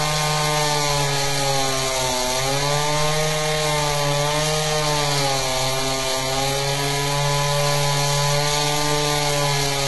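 Everyday sound runs through HE-AAC compression for the whole clip, likely at a very low bitrate around 16 kbps. Nothing reaches above 11.8 kHz, yet the treble below that sounds gritty and metallic, copied up from lower bands rather than dull. That separates it from simple low-pass filtering.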